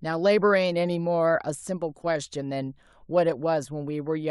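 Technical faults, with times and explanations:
No technical faults are present in the speech recording; the signal stays continuous and at a steady level, without damage introduced during capture, processing or transmission.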